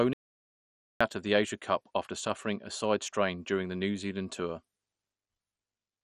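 From the start the speech sounds dull and gurgling, with a granular, watery edge and nothing above 13.1 kHz. This is heavy MP2 compression, likely at a rate near 56 kbps, where starved sub-bands switch off and the remaining ones are coarsely quantised.

At 0.13 s the sound cuts out to total silence, with no room tone, until 1.01 s, losing about 0.87 s. This audio dropout to silence likely came from the input signal vanishing while the recorder kept writing silence.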